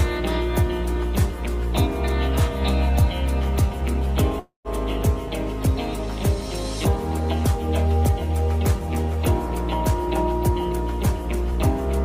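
From 4.39 to 4.68 s a call audio freeze interrupts the sound: the last moment stretches into a fading buzz, then about 120 ms of silence, and the sound resumes unbroken, now 253 ms late, likely from packets stalling and the jitter buffer running dry. A spectrogram shows smeared horizontal streaks decaying into a blank gap.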